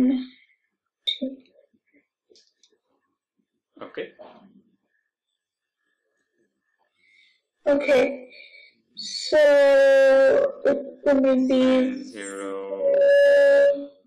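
The audio jumps forward at 1.22 s and again at 9.44 s, each time losing roughly one compressed frame of about 23.2 ms. These are compressed frames skipped. From 5.09 s to the end, the pace abruptly drops to 0.594 times normal speed while the pitch holds steady. This is likely a time-stretched section, and the unchanged pitch separates it from slowed playback, which would lower the pitch.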